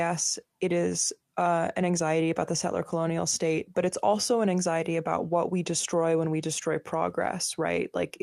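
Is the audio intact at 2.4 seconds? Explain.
Yes, the speech at 2.4 seconds plays through intact, with no dropout, click, distortion or other fault at that point.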